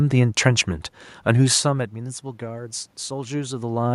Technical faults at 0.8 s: none

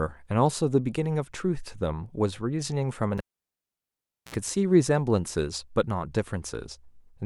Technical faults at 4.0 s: cable pulled and plugged in

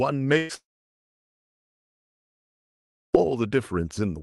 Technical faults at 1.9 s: long network dropout

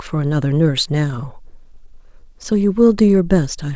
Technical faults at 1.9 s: repeated stalls (stutter)

